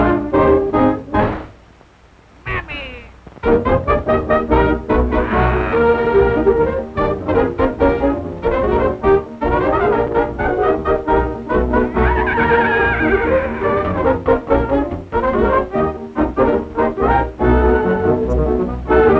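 No technical faults can be heard: the audio has passed through a call path with its ordinary coding noise and nothing above 8 kHz, which fits a wideband call codec such as G.722, and none of its gaps, glitches or level problems occur anywhere in the clip.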